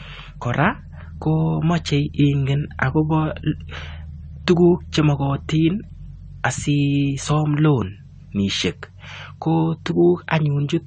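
Throughout the speech, the encoder was likely starved of bits as AAC compression, in its AAC-LC form, quantised each frame so coarsely that only the most prominent spectral detail survived. Nothing remains above 9 kHz, leaving the voice dull and muffled. The damage is plainly audible: sibilants and consonant edges smear into a fizzy blur, and held sounds take on a watery warble, which fits a bitrate of around 32 kbps.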